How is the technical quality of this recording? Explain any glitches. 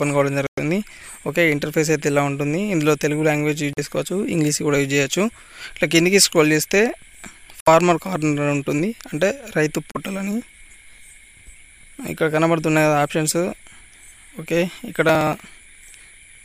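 The recording has two kinds of glitch: four brief gaps early on and a run of regular ticks near the end.

The gaps at 0.47, 3.73, 7.60 and 9.92 s are short silences of about 110, 40, 60 and 35 ms, after which the sound resumes. They are most likely a Bluetooth stall, where radio interference delays packets until the headphones' buffer empties and playback waits for retransmissions. Unlike driver dropouts, these are isolated, irregular and long enough to register as clear holes.

From 15.09 to 16.35 s, periodic USB or driver dropouts produce a steady ticking, one every 0.06 s, about twenty in all. Each time, something blocks the audio path and roughly 4 ms of audio is skipped outright, so the waveform jumps and clicks. The even spacing and tiny size of each loss distinguish this from the Bluetooth gaps, which are heard as silence rather than as a rhythmic tick.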